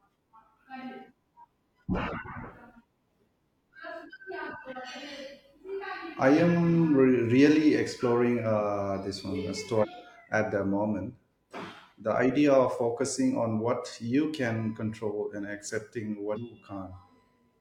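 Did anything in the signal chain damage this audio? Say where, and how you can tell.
Yes, damaged data in a compressed stream: short glitches at 9.79–9.85 s, just before "at the moment", and 16.32–16.37 s, where the decoder lost frame sync and resynced.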